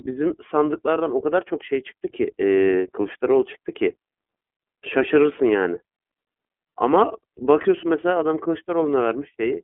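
From start to finish the speech runs through the iLBC codec. Nothing passes below about 250 Hz or above 3.4 kHz, so it has a thin telephone-line sound. Each frame's excitation is coded on its own, with no help from the one before, and this leaves a plainly audible rough, slightly synthetic grain. The grain fits 30 ms frames at about 13.3 kbps. A simple band-limit would sound narrow but smooth. This coarse texture marks a frame-independent speech codec.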